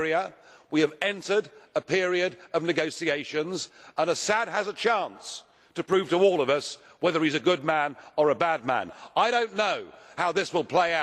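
No technical faults can be heard anywhere in the clip.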